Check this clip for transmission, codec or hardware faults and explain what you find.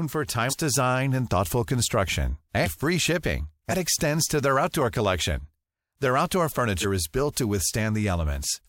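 There are two spots where compressed frames were skipped in this speech. At about 0.49 to 0.53 s, roughly a fifth of a second of audio goes missing, which fits about four frames of roughly 46 ms each. Around 6.8 s, a shorter jump drops about one frame. The decoder never played those frames, so the sound leaps forward.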